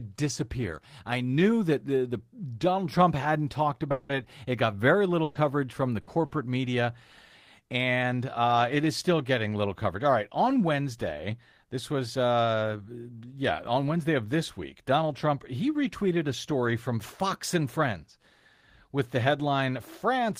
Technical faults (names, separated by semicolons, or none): long network dropout; burst of packet loss